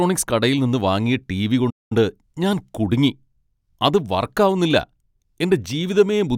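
A speech recording with a playback stall: output goes silent from 1.70 to 1.92 s, a gap of about 208 ms, then resumes at "ഞാൻ കുടുങ്ങി", likely from a starved buffer or blocked player thread.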